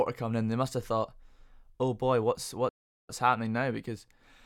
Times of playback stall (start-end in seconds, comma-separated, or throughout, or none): 2.69-3.09